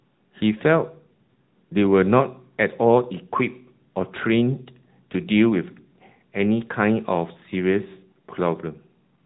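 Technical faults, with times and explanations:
Throughout, AMR narrowband mobile codec: speech rebuilt from a pulse-driven vocal-tract model at 8 kHz, fitting a 10.2 kbps mode, loses everything above 4 kHz and sounds plainly buzzy and synthetic.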